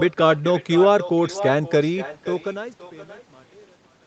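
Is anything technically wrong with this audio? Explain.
Yes. Throughout the speech there is echo with no canceller: a loudspeaker at the far end fed its microphone, and the signal returned after roughly half a second, about 13 dB quieter. Unlike room reverberation, it is a distinct, thinner repeat rather than a smooth decay.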